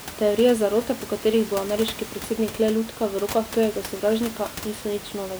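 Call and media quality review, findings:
Nothing stood out on listening; the only background is some room noise sitting about 14 dB below the speech.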